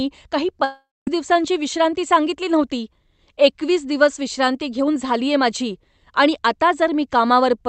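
From 0.64 to 1.08 s, the speech breaks off and the final sound is stretched into a buzzy tail that fades. Roughly 0.22 s of near silence follows before the speech resumes at "दिवसांची विश्रांती सांगितली नव्हती", with about 0.43 s of speech gone. This is likely a long network dropout. It is not a brief packet-loss glitch, because the concealment gives up and leaves a gap. The content is skipped rather than delayed. The treble above about 8 kHz is missing, which fits the Opus call path.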